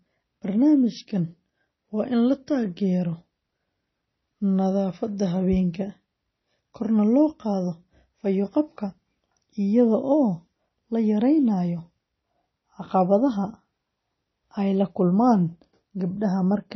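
Throughout the clip, the speech has likely been through heavy MP3 compression at a very low bitrate, which fits about 24 kbps. The encoder discarded everything above 5.9 kHz, dulling the treble, and leaves a watery, swirling texture with metallic, smeared s sounds.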